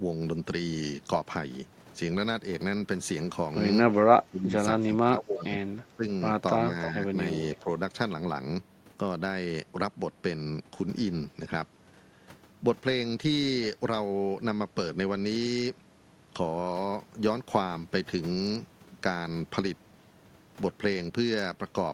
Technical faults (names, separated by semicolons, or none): speech suppressed in double talk; echo leak